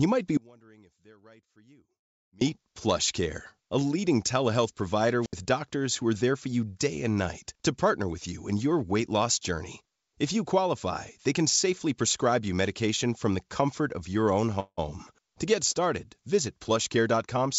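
From 0.37 to 2.41 s there is an audio dropout to a faint residue. For about 2.0 s the speech falls away abruptly, leaving only a faint trace roughly 30 dB below normal level. The likely cause is the wanted signal being lost while the path after the break stayed live, so the gap is not true silence.

At 5.21 to 5.33 s comes a wireless microphone squelch dropout. Static rises briefly, then the output mutes for about 71 ms before the speech returns. This happens when the FM radio link weakens far enough that the receiver's squelch closes.

A call audio freeze runs from 14.60 to 14.79 s. The last sound is stretched into a decaying buzz that ends in about 60 ms of silence. The whole fill lasts 175 ms, and speech then resumes where it stopped. No speech is lost, but it now arrives 175 ms later. This is likely the behaviour of a jitter buffer that ran dry while packets were held up.

From 16.89 to 17.48 s a jitter buffer speed-up makes the speech run about 9% fast at unchanged pitch, so it sounds hurried. 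To shrink an overfull buffer, the receiver cut out short pitch-period pieces, roughly 50 ms in total. Throughout the clip, the call path carries no content above 8 kHz, which fits a wideband codec such as G.722.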